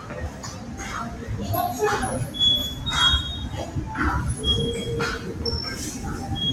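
A noise suppressor applied to music or sounds runs through the whole clip of sound. A speech-tuned processor keeps treating steady tones and ambience as noise, so the level swings by around 10 dB, with sudden onsets passing while sustained parts sink and pump. Sound cut by the noise suppressor is clearest from 0.0 to 0.8 s and again from 1.11 to 1.26 s. The steady and fading parts there are pulled down by about 6 dB and about 5 dB respectively, affected for most of a second in total.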